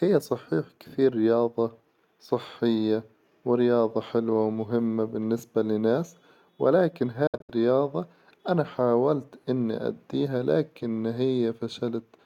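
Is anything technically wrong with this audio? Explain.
Yes, there is one fault. Bluetooth dropout, 7.27 to 7.50 s: packets likely arrived too late and were dropped, cutting short silent holes (longest 64 ms), after which the speech resumes further along.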